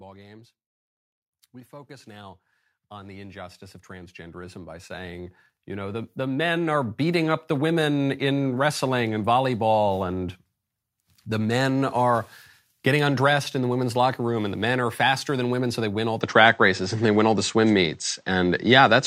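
A speech recording in which, from 1.69 s to 7.27 s, the voice and the background swell together, climbing by about 20 dB over those five and a half seconds until the level settles just before "up the women in". That steady joint rise is automatic gain rising: the gain control judged the input too quiet and kept turning it up, lifting the room noise along with the speaker. At 16.21 s, right after "so they win all", the sound abruptly turns duller and narrower with no gap, loses everything above 8.2 kHz, shifts slightly in level and tone, and carries a faint new noise floor well beneath the voice through to the end. This is likely the input switched to a poorer device, such as another microphone or a headset's call profile, whose narrower band and different character replace the original pickup.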